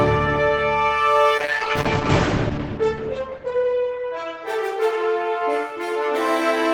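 From 1.39 to 5.11 s, a call bitrate drop, which fits about 10 kbps, coarsens coding; the audio turns rough, cut off above 8 kHz.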